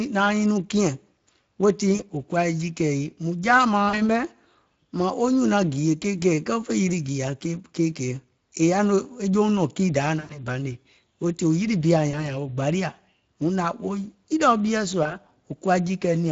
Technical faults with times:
0.00-16.32 Speex codec
1.95-2.01 VoIP packet loss concealed by the speech codec
3.89-4.10 VoIP packet loss concealed by the speech codec
10.19-10.39 VoIP packet loss concealed by the speech codec
12.11-12.31 VoIP packet loss concealed by the speech codec
15.03-15.17 VoIP packet loss concealed by the speech codec

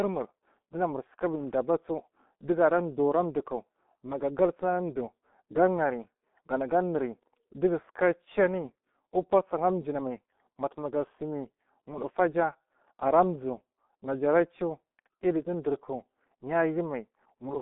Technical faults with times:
0.00-17.61 G.723.1 codec

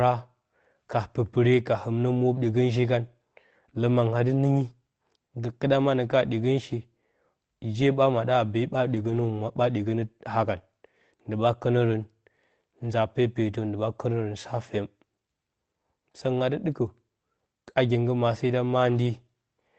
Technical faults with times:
8.91-9.21 lost packet rebuilt from error correction

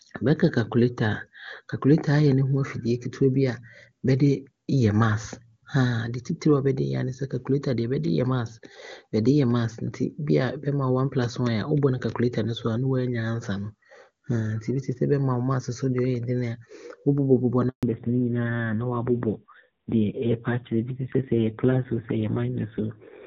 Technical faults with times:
17.69-17.83 handover gap
17.83-23.27 fallback to narrowband

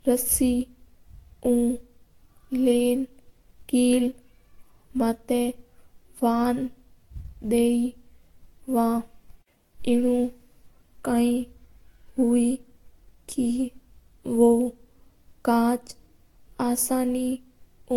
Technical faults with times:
0.00-17.96 generation loss

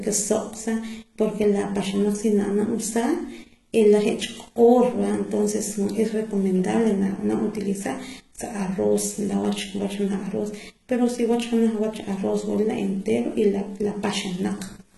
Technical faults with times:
0.00-14.98 HE-AAC compression

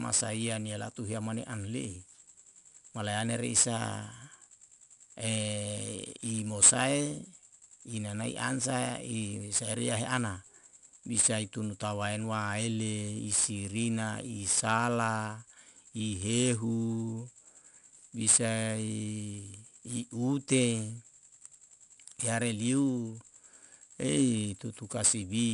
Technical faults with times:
0.00-25.53 4-bit ADPCM compression

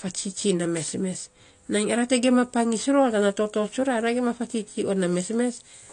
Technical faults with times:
0.00-5.92 AAC compression

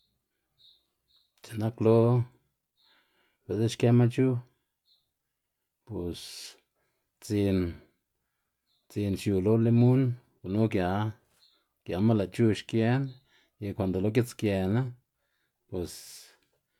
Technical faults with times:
none

